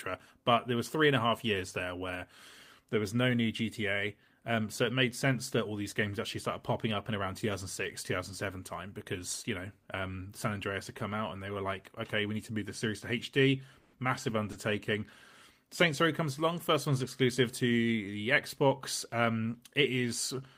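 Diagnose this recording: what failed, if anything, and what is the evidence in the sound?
The failure is a call audio freeze in the network and jitter-buffer stage. At 13.79 s the speech stops advancing for about 140 ms, until 13.95 s. The last sound is held over that stretch as a decaying buzz or hiss rather than true silence. Afterwards the speech resumes where it stopped, with nothing lost, but everything after it now runs about 140 ms later. The likely cause is delayed packets draining the jitter buffer, with the receiver extending the final audio until the packets arrived.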